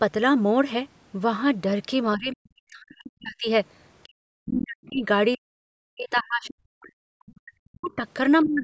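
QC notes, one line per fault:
2.16–3.49 s, 4.06–5.03 s, 5.36–5.6 s, 5.88–8.01 s and 8.44 s to the end: speech suppressed in double talk. The talker repeatedly dips by as much as about 40 dB, sometimes vanishing in pieces, likely because both sides spoke at once and the echo canceller, unable to separate talker from loudspeaker echo, pulled everything down. On a waveform the envelope collapses in these stretches. A spectrogram shows the harmonics, already capped at 8 kHz by the call path, thinning to near-blank columns.
7.85–7.93 s and 8.43–8.53 s: other side's voice leaking through. Two brief scraps of a second voice appear, the first at about 30 dB and the second at about 20 dB below the talker, likely residual loudspeaker echo the canceller failed to remove. On a spectrogram they show as faint, short smears of unrelated harmonic structure inside the suppressed gaps. The waveform shows only small ripples where the main signal has dropped.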